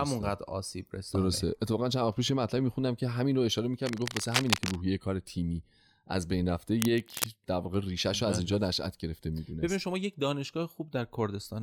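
From 3.86 to 4.77 s and again from 6.80 to 7.26 s, cable scratch noise sits over the speech: dense, uneven bursts of rustling grit only a little quieter than the voice. The likely cause is a worn cable or connector being moved, its contact resistance fluctuating rapidly. Unlike handling thumps, it is not low and boomy, and unlike isolated clicks, the crackle comes in tight, irregular clusters lasting about half a second to a second.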